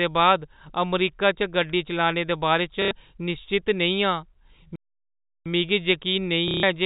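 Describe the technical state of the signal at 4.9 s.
At 4.9 s the output has gone silent in a playback stall running from about 4.76 s to 5.46 s, roughly 0.7 s of dead air. The speech stops mid-flow, most likely because the player ran short of data or its thread was held up, then resumes. On a waveform this shows as a flat, silent stretch; a spectrogram shows a blank vertical band across every frequency, including the telephone-band region below 4 kHz.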